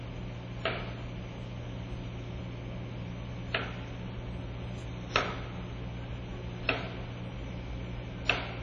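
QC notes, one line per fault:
Throughout: WMA compression. The whole clip has a ringing, washy smear, with hiss that swells and fades along with the sound and nothing audible above 10.8 kHz. The likely cause is a transform codec using long blocks that spreads quantisation noise over tens of milliseconds and drops weak components. The heavy damage fits a bitrate around 32 kbps. Unlike a plain low-pass filter, the breathing hiss and the smearing around onsets point to codec loss rather than just a missing top end.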